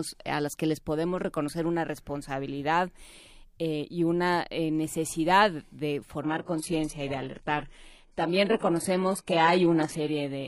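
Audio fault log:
6.22–10.47 s, adaptive stream at a lower bitrate: right after "una eh necesidad de", the quality drops abruptly to the end of the clip with no gap in the sound. Codec artefacts rise and nothing remains above 11.5 kHz. The stream switched to a lower-bitrate version when the connection slowed. The sound points to a move from a transparent AAC encoding to a very low-bitrate HE-AAC profile, somewhere near 12 kbit/s.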